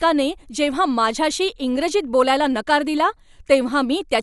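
From start to finish the speech sounds dull, with nothing above 11.4 kHz and a rough, fluttery hiss clinging to it. That's likely Dolby Digital compression at a low bitrate, probably around 64 kbps, which cuts the band and fills bare frequency lines with dither noise.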